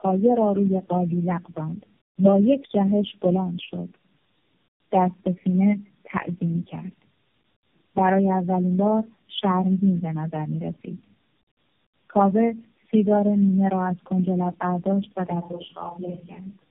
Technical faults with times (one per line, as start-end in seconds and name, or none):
0.00-16.71 tandem speech coding